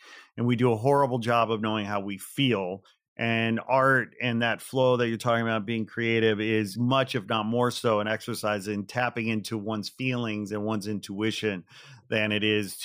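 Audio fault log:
throughout imaging from linear upsampling: the speech appears to have been raised from 24 kHz to 48 kHz by joining samples with straight lines, a weak filter that softens the top of the original band and lets a mirrored copy of the spectrum through between 12 kHz and 24 kHz, around 30 dB down. That copy adds a faint metallic shimmer to sibilants. On a spectrogram it shows as a dim reflection of the speech energy folded about 12 kHz.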